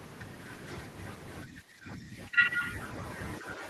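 An echo canceller likely mistook overlapping talk for echo, giving speech suppressed in double talk: the speech dips by roughly 10 dB from 1.46 to 2.63 s, then by a smaller amount from 3.4 to 3.67 s.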